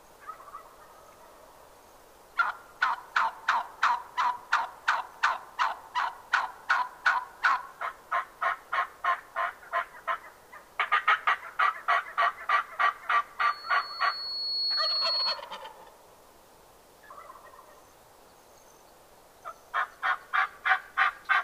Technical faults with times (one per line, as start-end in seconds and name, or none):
13.39-15.41 loudspeaker feedback squeal